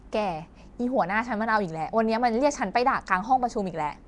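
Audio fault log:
Throughout, Nellymoser compression. The speech has a rough, hissy halo and a smeared, watery texture, with nothing above 10.6 kHz. This is likely Nellymoser Asao coding, which fills starved weak bands with noise. The damage fits roughly 44 kbps.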